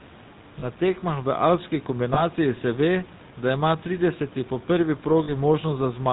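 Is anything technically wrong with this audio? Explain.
Yes, two kinds of fault are audible.

GSM full-rate codec, throughout: the speech is rebuilt from a vocal-tract model driven by sparse, regular pulses, with nothing above 4 kHz. The result is a buzzy, gravelly roughness, consistent with a 13 kbps full-rate coder.

Lost GSM frames, at 0.60 to 0.65 s, 2.14 to 2.21 s (between "tekmah v alpski" and "se ve da ima"), and 5.24 to 5.31 s: the last good frame's settings were repeated, leaving a brief rough, metallic ring. The first two fit a single lost 20 ms frame and the third fits two lost frames, about 40 ms.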